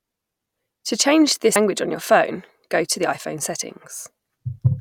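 At 1.56 s, just before "on your phone go", damaged data in a compressed stream makes the decoder lose sync. A brief chirp or blip results.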